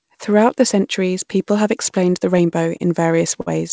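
From 0.94 s to the end, the speech turns thin, bright and hissy, with sibilants pushed forward. This is pre-emphasis left on: a treble lift following the CD 50/15 µs curve, about 8 dB stronger at 10 kHz than at 1 kHz, was never undone by the matching de-emphasis.

Between 2.38 and 3.49 s the speech drags and stutters through seven short hitches, the longest 51 ms, together about 127 ms of stretched sound. These are repeated stalls: the jitter buffer kept running dry, so the receiver extended the last sound until audio resumed, losing nothing.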